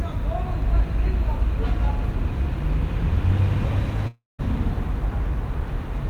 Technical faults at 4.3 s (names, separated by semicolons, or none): long network dropout